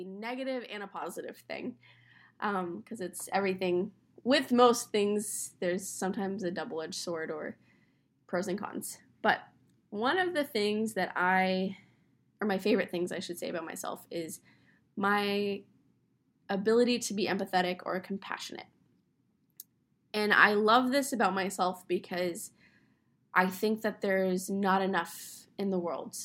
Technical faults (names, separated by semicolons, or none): microphone volume stepped up